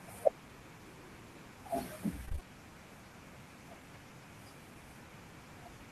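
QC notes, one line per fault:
2.25–2.45 s, repeated packet loss (robotic sound): five short dropouts, the longest 19 ms, each patched by extending prior sound, leaving 42% of this stretch concealed and the sound choppy.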